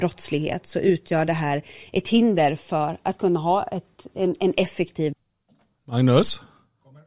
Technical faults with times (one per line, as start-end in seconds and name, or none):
none